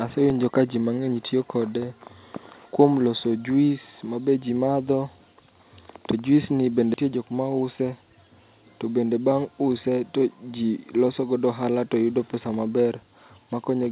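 A block of digital silence at 0.30 s, just before "ka ji mang'eny tiyo", cuts the speech to zeros for about 2.9 ms, which fits one unfilled 128-sample buffer, and leaves a sharp tick.

A skip ahead from 6.94 to 7.05 s, right after "juis ni", drops roughly 0.7 s of speech, so the phrase joins abruptly.

A jitter buffer speed-up from 7.55 to 7.93 s trims about 40 ms of pitch periods to reduce delay. The speech runs at about 109% speed at unchanged pitch and sounds hurried, all within the telephone-band call path that carries nothing above 4 kHz.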